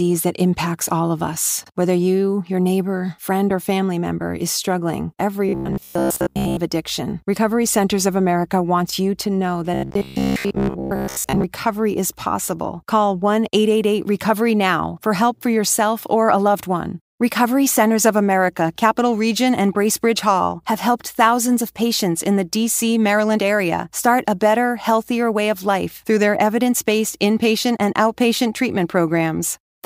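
In this speech clip the voice turns into a rigid, metallic buzz from 5.49 to 6.57 s and again from 9.74 to 11.44 s, still roughly tracking the words but carrying a fixed-rate buzz at 66.7 Hz. This is robotic sound from repeated short buffers, likely caused by audio arriving too seldom, so a stretch of about 15 ms is replayed over and over for most of each span while the real audio is skipped.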